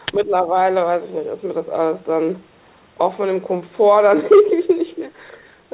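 From 0.16 to 0.54 s the speech dips in level by up to about 10 dB, in broken stretches totalling roughly a fifth of a second. This is likely speech suppressed in double talk: with both ends active, the echo canceller could not tell the near talker from loudspeaker echo and attenuated everything. The drops sit within a signal that has nothing above 4 kHz, consistent with a narrowband telephone codec such as G.711.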